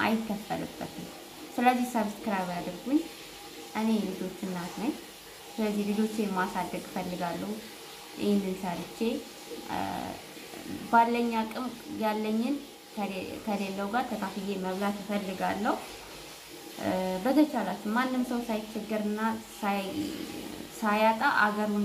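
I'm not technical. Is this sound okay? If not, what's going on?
Yes, the sound is fine from a technical point of view: there are no glitches, dropouts or other problems to point to anywhere in it.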